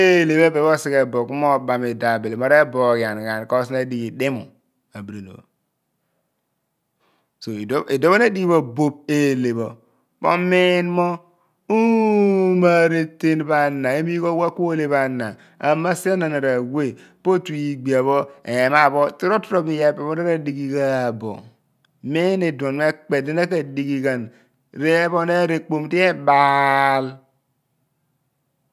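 No technical faults can be heard in this speech recording, so there are none to describe in time order.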